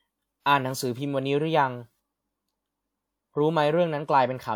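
At 0.40 s, a pre-echo runs for about 55 ms up to 0.46 s, just ahead of a sharp speech onset. The codec's quantisation noise, scaled to the loud attack, has spread backwards across the block into the quieter moment before it, so a short hiss leads in and the onset sounds blurred. On a spectrogram, a smear of broadband noise appears before the attack's vertical edge. The waveform shows a low, fuzzy ramp instead of a clean rise.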